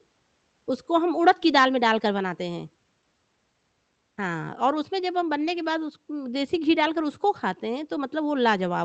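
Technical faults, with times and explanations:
Throughout, clock drift between sender and receiver: the speech has a faintly unsteady pace, with small timing hiccups at irregular intervals. The sender's clock runs roughly 5 percent fast against the receiver's, so the jitter buffer keeps overfilling and has to be trimmed back repeatedly.
0.00 to 8.58 s, repeated timing corrections: short slices of speech are dropped again and again, all in the same direction but unevenly spaced, so playback runs at 105 percent speed with slight skips. The receiver cuts these pieces to stay level with the faster sender, beneath the dull top end of the Opus call path limited to 8 kHz.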